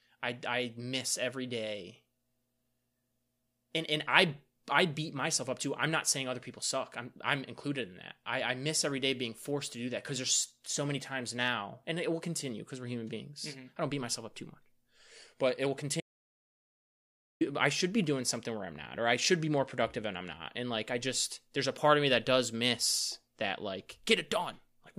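At 16.00 s, right after "but it will", the speech drops out to silence until 17.41 s, resuming at "I should be doing". The gap is silent with no room tone, and about 1.4 s of speech is lost, likely from the input signal being interrupted while recording continued.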